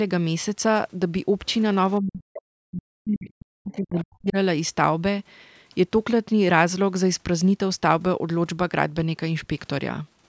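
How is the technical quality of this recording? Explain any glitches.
The recording has two call-processing glitches in the speech, both clustered between about 2 and 4.4 seconds.

From 1.99 to 4.36 s there is speech suppressed in double talk, likely caused by both ends talking at once. The echo canceller, unable to tell the local talker apart from the loudspeaker echo, attenuated the microphone signal wholesale. The voice dips and breaks up for roughly two seconds in total, sinking by as much as about 40 dB at its deepest, so parts of the speech nearly vanish.

From 3.97 to 4.02 s, during that suppressed stretch, the other side's voice leaks through, likely because the echo canceller failed to fully remove the loudspeaker playback from the microphone. The result is a brief scrap of a second voice lasting about 50 ms, sitting roughly 20 dB below the main speech, heard as a faint fragment rather than a continuous voice. 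Throughout the clip, the call microphone processing trims the lowest bass, and nothing sounds above 8 kHz.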